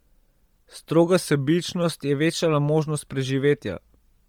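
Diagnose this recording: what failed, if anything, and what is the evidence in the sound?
Throughout the clip the speech has a breathy, grainy edge, with the top of the spectrum sounding hissy and smeared rather than clear. This is heavy codec damage, most likely from Bluetooth LC3 compression in the codec stage. At low bitrates LC3 discards much of the upper spectrum and fills the gaps with shaped noise. The degree of damage fits a low bitrate around 32 kbps with 10 ms frames.

From 1.26 to 1.84 s the speech drops about a semitone in pitch, roughly 97 cents, and slows by about 5.4%, then snaps back to normal. Pitch and speed move together, which points to a drift correction step in the driver or buffer stage. Clock-matching software likely changed the playback rate in a single jump to refill its buffer before returning to the nominal rate.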